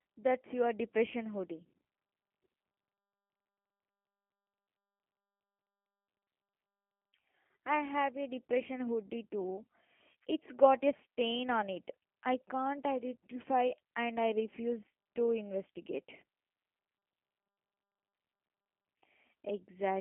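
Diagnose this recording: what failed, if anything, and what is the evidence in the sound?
The codec stage failed throughout: the speech has the rough, slightly synthetic buzz of G.729 coding, which fits an 8 kbit/s CELP stream. Nothing sounds above 3.7 kHz, and the band sits at 200 Hz to 3.4 kHz. A plain telephone-band filter would dull the sound without adding this rebuilt, pulse-excited texture.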